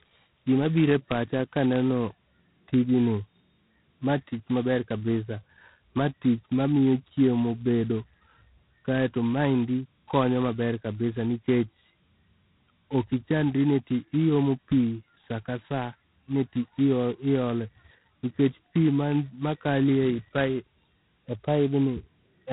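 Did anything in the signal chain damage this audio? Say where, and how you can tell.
Yes. The damage happens at the codec stage, and it lasts the whole clip. This is G.726 ADPCM. The speech carries a harsh, rasping hiss that rises and falls with its level. It is heaviest on loud syllables. Nothing passes above about 3.9 kHz. The codec sends only a few bits per sample, coding the error of an adaptive predictor. That coarse quantisation creates the noise. Its heavy, gritty character points to the 16 kbit/s mode.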